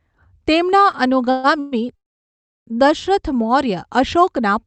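Repeated stalls (stutter) run from 0.91 to 1.75 s in this speech recording. Packets kept arriving late, so the jitter buffer emptied four times, and the receiver stretched the last sound across 282 ms in total, the longest gap 131 ms. About a third of that stretch is filled-in audio, so the speech drags but nothing is lost. A call audio freeze follows from 1.96 to 2.70 s, a 710 ms hold in which the sound trails off briefly and then drops to silence for 680 ms before resuming exactly where it stopped. The likely cause is packets held up in transit, which adds delay rather than removing content. Both faults sit on an Opus call path whose audio tops out near 8 kHz.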